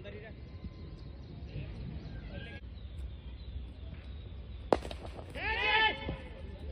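At 5.05 to 5.19 s, repeated frames: a 139 ms block of compressed audio plays twice, causing an audible stutter and lengthening the clip by 139 ms.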